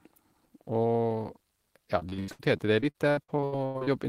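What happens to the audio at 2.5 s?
Repeated packet loss (robotic sound) runs from 1.99 to 3.89 s: repeated short gaps, up to 83 ms, are patched by extending prior sound, leaving speech choppy.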